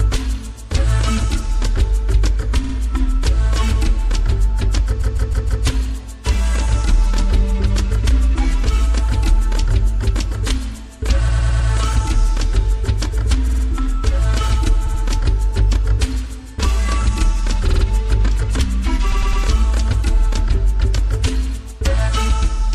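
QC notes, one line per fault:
Throughout: MP3 compression, likely. Treble is cut off and weak detail flickers in and out from frame to frame, giving a watery, swirly texture with smeared attacks. The plainly audible damage points to a low bitrate of about 64 kbps.
2.63, 5.01, 11.27, 13.47, 14.85, 17.67 and 19.11 s: repeated frames. Short blocks of 52 to 157 ms are replayed two to four extra times, producing a stutter. Each event lengthens the audio by 0.1 to 0.63 s.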